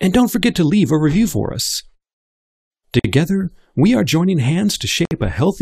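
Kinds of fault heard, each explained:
Gap at a join of encoded pieces: separately encoded stretches were joined with encoder delay and end padding left in, leaving silences of 50 ms at 2.99 s and 58 ms at 5.05 s with smeared edges. Unlike a dropout, no speech is lost; it resumes where it stopped.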